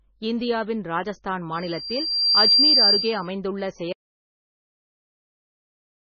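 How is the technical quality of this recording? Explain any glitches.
The recording has poor technical quality, with heavy compression damage throughout and a loud feedback squeal early on.

Throughout the speech, nothing survives above 6.5 kHz, and the sound is watery and swirling. This is likely MP3 compression at a very low bitrate. Starved of bits, the encoder cut the treble outright and kept zeroing weak frequency lines, which flicker on and off from frame to frame.

A loudspeaker feedback squeal runs from 1.55 to 3.28 s, starting just after "இந்தியாவின் ராஜஸ்தான்". A microphone was picking up its own loudspeaker, and at 4.7 kHz the loop gain exceeded one. That tone grew on itself in well under a second into a piercing whistle, roughly 10 dB above the speech.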